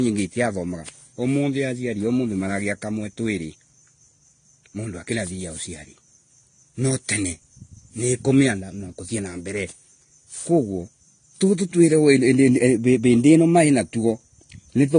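From start to finish the speech has a hard ceiling near 9.7 kHz, which shows on a spectrogram as a flat, empty band above that line. The sound fits transcoding between lossy codecs, likely a Vorbis encode re-encoded as low-rate AAC-LC. The second encoder spends its scarce bits copying the first one's artefacts and adds its own, so two kinds of damage are heard together.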